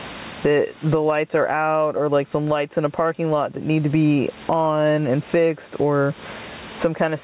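Throughout this speech clip, the microphone gain was likely set far too high, so a fast limiter clamps every loud syllable. The resulting gain pumping swings the level by roughly 25 dB, all heard through a call codec band-limited to 4 kHz.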